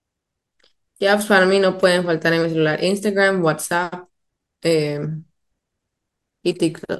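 No technical faults can be heard in the speech at any point.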